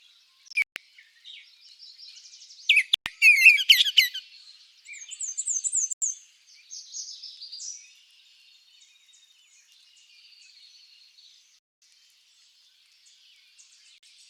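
At 0.48 s the sound breaks up into several short silences spread over about 0.28 s, the longest lasting about 0.14 s. Single gaps follow at 2.94 s (0.12 s), 5.93 s (0.09 s), 11.62 to 11.81 s, and 13.98 s (0.05 s). Each time the sound resumes further along, as if it had kept playing, which points to a likely Bluetooth dropout where packets missed the headphones. A waveform shows flat stretches, and a spectrogram shows blank vertical bands across all frequencies.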